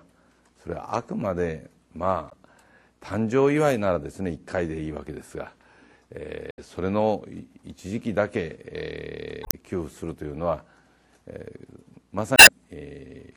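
Four short blips, at 2.29 to 2.33 s, 6.49 to 6.59 s, 9.42 to 9.54 s and 12.35 to 12.49 s, come from damaged data in the compressed stream. The decoder hits bad frames, loses sync and hunts for the next header, giving a brief chirp, squawk, click or short hole each time.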